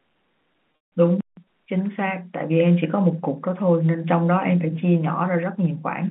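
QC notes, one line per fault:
0.72–0.92 s, packet loss with pitch repetition: a brief buzzy hold that fades to silence, then the sound returns with a short cross-fade. About 180 ms went missing across 200 ms, the longest gap 160 ms. The receiver repeated the last pitch period, fading it over roughly 50 ms before going quiet.
1.21–1.37 s, playback stall: the audio halts mid-flow and stays silent for about 165 ms before carrying on. The player likely ran short of data or its thread was blocked, so output dropped out until it recovered. The band-limited telephone sound is unaffected around it.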